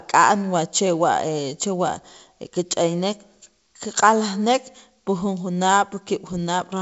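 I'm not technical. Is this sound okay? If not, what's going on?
Yes, this speech has no technical faults; it has simply passed through ordinary G.722 wideband telephone coding, which leaves only a light trace and carries nothing above about 7.7 kHz, as that kind of phone line normally does.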